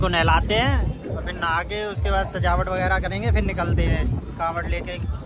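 No technical faults detected.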